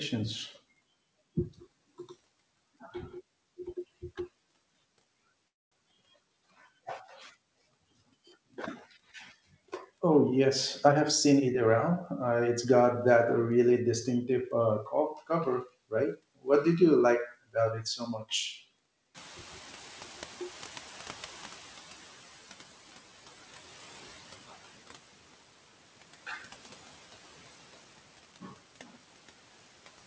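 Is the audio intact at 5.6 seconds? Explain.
No. A call audio freeze runs from 5.48 to 5.74 s, so 5.6 s falls inside it. Packets were likely held up in transit, leaving the jitter buffer with nothing to play. The receiver fills about 0.24 s, almost all of it heard as silence, before the speech resumes exactly where it broke off. Nothing is lost, but a gap is inserted and everything after it arrives about 0.24 s later.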